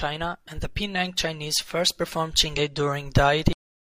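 At 2.54 s the speech breaks for a brief moment, lasting until 2.59 s. This is damaged data in a compressed stream. Some bytes in that stretch of the file were wrong or missing. The decoder could not read those frames properly. It lost sync and hunted for the next valid frame header. The result is a short, harsh blip of about 50 ms. It sounds unlike the surrounding audio.

At 3.53 s the audio has a cut-off end. The final buffers were never written out or played. The sound stops abruptly, in mid-sound, with no natural decay. It falls straight into digital silence. That silence runs unbroken to the end of the clip. The cut is sudden enough to leave a hard edge. Nothing tapers or fades.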